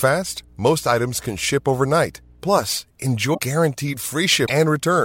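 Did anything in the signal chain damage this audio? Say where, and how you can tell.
Yes. In the analogue wiring, mains hum at 60 Hz sits about 30 dB below the speech from 0 to 2.56 s, a steady pitched tone unlike broadband hiss, from a ground loop or a nearby transformer.

At the codec stage, brief glitches at 3.33–3.39 s and 4.46–4.50 s skip the audio ahead. Each lasts a frame or two of 26.1 ms, which points likely to a broken MP3 bit reservoir rather than plain dropouts.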